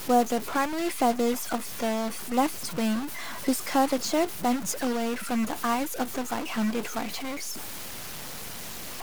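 Speech with harsh, buzzy distortion throughout and noise filling the pauses: a stuck bit, likely from a broken data line or converter, shifting about half the samples by a step of about -30 dBFS. The waveform's pauses thicken into fuzz; the spectrogram shows broadband grain everywhere.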